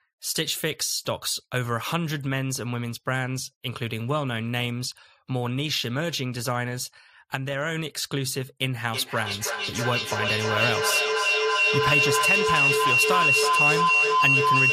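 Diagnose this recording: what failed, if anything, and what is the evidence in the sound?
Feedback howl, an acoustic loop in the call path. From 8.89 s to the end, a tone around 3 kHz builds. It pulses roughly every third of a second and peaks about 6 dB above the speech. Each microphone-to-loudspeaker trip adds gain, so the repeats grow instead of fading.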